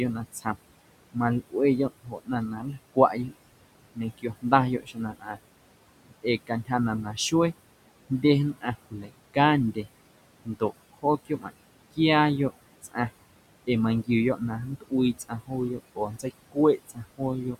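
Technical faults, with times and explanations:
Throughout: noise suppressor artifacts. The suppressor pulls the room noise, which sits about 15 dB under the speech, down by about 21 dB between phrases, so the leftover noise pumps.
0.33–0.56, 1.14–3.33, 3.95–5.39, 6.07–7.33, 8.1–9.86, 10.45–12.97 and 13.65–17.56 s: speech cut by the noise suppressor. The suppressor mistakes quiet speech for noise and drops it by about 16 to 22 dB, so parts of the speech sound swallowed or faint.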